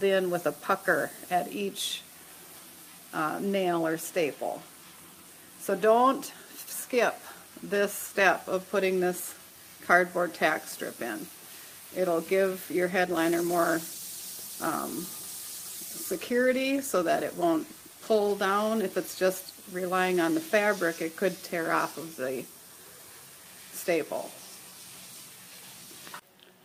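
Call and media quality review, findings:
Call bitrate drop, 12.97–18.41 s: coarse, muffled audio for about 5.4 s, fitting an encoder cut from 64 to 19 kbps. Sound stays continuous, unlike packet loss gaps.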